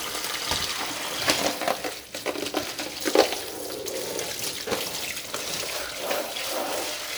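Nothing to flag in this recording of sounds; no technical faults turn up anywhere in it.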